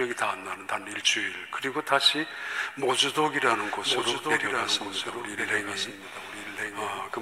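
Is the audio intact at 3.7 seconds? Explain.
No. A doubled audio track is present at 3.7 seconds, running from 3.55 s to the end of the clip. A second full-band copy of the sound comes in abruptly and trails the original by about one second, roughly 5 dB quieter, with no decay or room colour of its own. Everything is heard twice, as a flat, detached repeat. The likely cause is the same audio reaching the mix through a second, slower path.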